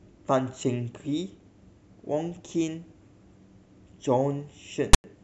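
A speech recording in which file tags were played as audio: a block of text tag data was decoded as samples from 4.93 to 5.04 s, giving a loud, one-sided rasp with hard edges that drops to silence where the zero padding is read.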